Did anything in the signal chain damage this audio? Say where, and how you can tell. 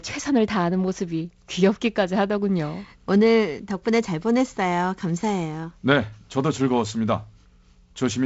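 No, nothing in the chain damaged this speech; the band stops near 7.7 kHz and the upper band carries a faint hiss, both consistent with the wideband G.722 telephone coding it passed through, whose slightly noisier lower band suggests one of its reduced-rate modes, likely 48 kbit/s.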